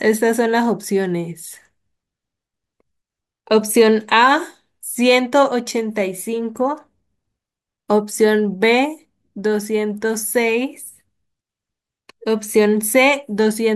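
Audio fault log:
No faults are heard anywhere in this speech recording. Nothing in it calls for an entry in this log.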